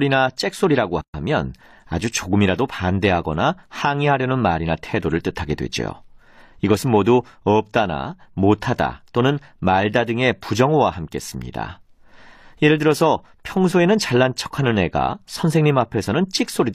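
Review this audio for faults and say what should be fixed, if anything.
A gap at a join of encoded pieces runs from 1.01 to 1.14 s, 127 ms. The speech halts, then resumes where it stopped. Separately encoded pieces were joined untrimmed, keeping encoder start delay and end padding. Trim both before joining, or encode once.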